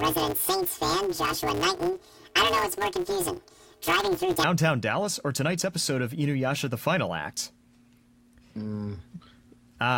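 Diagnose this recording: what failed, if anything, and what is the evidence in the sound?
A sample-format conversion step read planar stereo as interleaved from 0.00 to 4.44 s. Each block holds all its left samples followed by all its right samples, but it was taken as alternating left-right pairs, so every block plays twice at double speed, once per channel. The blocks are short, about 5.33 ms, which fits a 256-sample block. The result is a robotic buzz over the speech at roughly the 188 Hz block rate, with no clear octave jump.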